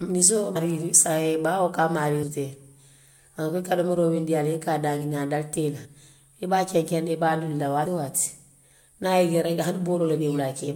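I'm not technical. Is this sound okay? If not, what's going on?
No. The speech hiccups and jumps ahead four times, at 0.55, 2.22 (after "baa wo ka a"), 5.84 (between "dalite i la" and "i be") and 7.85 seconds. These are compressed frames skipped: short chunks of the file, from about 0.07 to about 0.2 of a second, were missing or rejected as damaged, so playback leaps past them.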